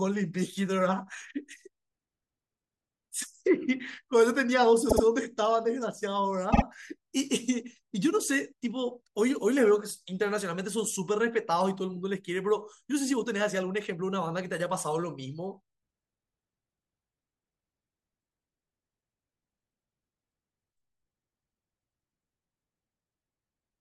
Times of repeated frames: 4.88-5.03, 6.52-6.62

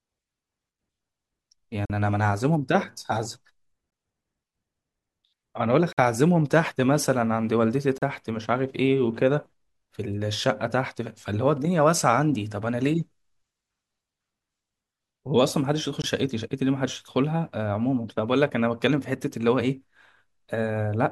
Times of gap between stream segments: 1.85-1.90, 3.90, 5.93-5.98, 7.98-8.02, 16.02-16.04

